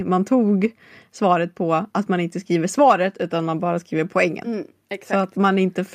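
Speech, with no audible technical faults anywhere in the recording.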